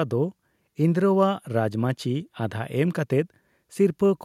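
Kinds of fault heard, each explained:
No technical faults are audible in this speech recording.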